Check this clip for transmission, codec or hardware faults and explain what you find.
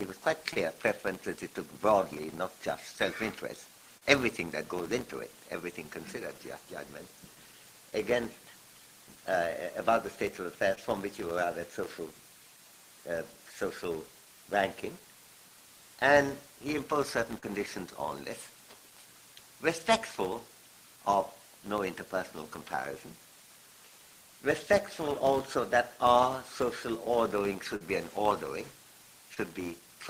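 Two faults are present: a steady block-rate buzz and six brief dropouts that were patched over by the receiver.

Throughout the clip, a filter restarted on every block forgets its internal state at each block boundary. Each block starts with a small transient, so a buzz at about 172 Hz tracks the audio's level. That rate fits a 256-sample block.

Short concealed packet loss occurs at 0.53, 3.98, 10.75, 17.39, 27.76 and 29.34 s. In each case 20 to 40 ms of audio went missing. The decoder filled each gap by extrapolating the preceding sound before crossfading back, which leaves a brief smear or wobble.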